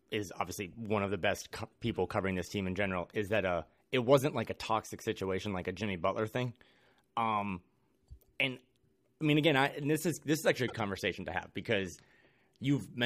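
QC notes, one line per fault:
10.65–10.73 s, damaged data in a compressed stream: between "is this is actually" and "conversation to have because", the decoder misreads corrupted frames and hunts for sync, producing a brief disturbance.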